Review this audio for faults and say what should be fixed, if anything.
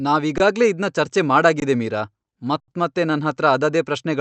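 The speech briefly freezes into a flat, near-silent hold at 0.38 to 0.40 s, just before "ಇದ್ನ ಚರ್ಚೆ"; at 1.60 to 1.62 s, right after "ಇದ್ನ ಚರ್ಚೆ"; and for a longer 80 ms at 2.60 to 2.68 s. Each one is an underrun with held sample: the output buffer ran dry, the converter held its last value, and playback then resumed where it had stopped, so each hold ends softly. To prevent it, enlarge the output buffer or raise the audio thread's priority so data always arrives in time.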